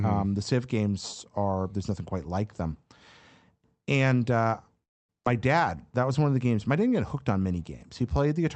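From 4.83 to 5.11 s the speech stops for about a quarter of a second. This is a call audio freeze. Almost all of that time, about 250 ms, is silent, with only a brief trace of the previous sound carried over before it dies away. The likely cause is delayed packets draining the jitter buffer. When the audio resumes, it picks up where it stopped. Nothing is lost; a pause has simply been inserted.

Right after that, between 5.25 and 5.27 s, comes a skip ahead. Playback jumps forward, and roughly a tenth of a second of speech is gone. The join is nearly seamless, with only a few milliseconds of fill. The result is a sudden small lurch.

From 5.34 to 6.56 s there is a jitter buffer slow-down. The buffer is rebuilding its reserve by repeating short pitch periods. Speech plays at about 91% speed over this stretch, adding 123 ms in total. Pitch stays the same, but sounds are drawn out.

Throughout, the audio has the band-limited coding character of an Opus call path, with nothing above 8 kHz.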